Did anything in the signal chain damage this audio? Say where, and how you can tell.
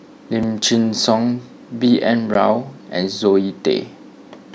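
Yes. Blocks of digital silence at 0.43 s and 2.34 s point to the driver or buffer stage. The speech drops straight to silence with no fade. The first gap is 4 ms and heard as a tick, which fits a 64-sample buffer. The second, at 12 ms, is also short enough to be heard as a tick or dip. Both are consistent with the program failing to fill the output buffer in time, so zeros went out instead.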